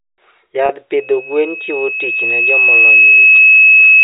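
At 0.66 s the speech briefly stalls for about 30 ms, until 0.69 s, which fits a single lost packet. This is packet loss with pitch repetition: rather than leaving a gap, the receiver kept replaying the last pitch period, so the sound holds on one slightly buzzy, static note before normal speech resumes. That frozen, periodic hum is what separates it from a plain dropout, which would be a clean hole of silence, or from a click.

From 0.96 s to the end of the clip, a loudspeaker feedback squeal takes over. A single tone at 2.6 kHz begins faintly and swells over roughly two seconds, eventually sitting about 15 dB above the speech. The microphone is picking up the loudspeaker it feeds, and at 2.6 kHz the loop gain exceeds one, so the tone keeps reinforcing itself. Unlike a steady interfering tone or mains hum, it grows on its own and is far higher in pitch. It sits well inside the 4 kHz limit of the G.711 telephone path, so the coding passes it at full strength.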